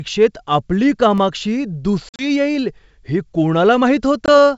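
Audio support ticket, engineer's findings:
Block of digital silence at 1.18 s: single tick, about 0.73 ms long, which fits a 32-sample block left unfilled, likely output buffer underrun. Waveform shows a flat near-silent run with hard step edges. Spectrogram shows a thin broadband vertical line.

Packet loss on an ADPCM call, 2.09–2.26 s, just before "येईल हे": 80 ms dropped across 100 ms, longest hole 50 ms, around seven packets. Also at 4.26–4.29 s, 20 ms, about two packets. The decoder's predictor and step size desync, so audio resumes slightly distorted before settling. Waveform shows hard-edged silent gaps. Spectrogram shows blank vertical bands. Carried over G.722 at 64 kbit/s, with codec damage faint at most.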